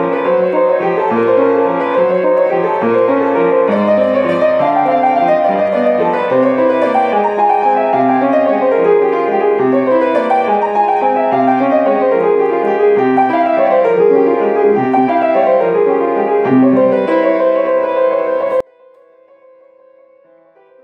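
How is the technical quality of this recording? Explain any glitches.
The recording has one clear fault near the end. From 18.60 s to the end, there is an audio dropout to a faint residue: the sound cuts off abruptly and only a faint trace remains, roughly 30 dB below its normal level. The likely cause is a break in the signal feed while the downstream path stayed live, so a weak leak carried on. On a waveform, the envelope collapses in a single step to a thin band. A spectrogram shows the energy dropping abruptly to a much dimmer trace.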